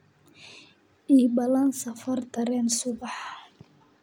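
No technical faults can be heard anywhere in this recording.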